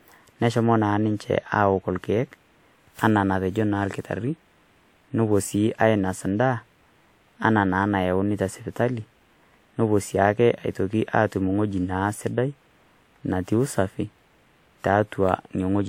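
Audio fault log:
throughout generation loss: swirly, hollow, smeared speech with blurred attacks, likely from about four lossy re-encodes, fitting WMA near 96 kbit/s; spectrogram shows patchy holes and smeared onsets.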